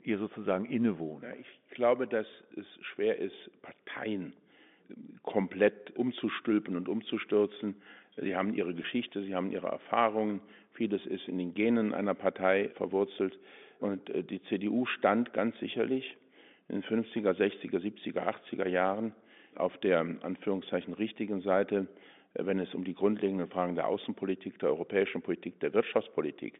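A German speech recording carried over a telephone line has a brief, slightly held buzzy smear at 8.83 s, just after "haben ihre" and before "sie haben ihre". This is packet loss with pitch repetition. About 10 ms of audio went missing, which fits a single lost packet, and the receiver filled the hole by repeating the last pitch cycle, briefly sustaining the tone rather than leaving a gap. The narrow band from roughly 150 Hz to 3.6 kHz heard throughout is the G.711 telephone coding working as intended.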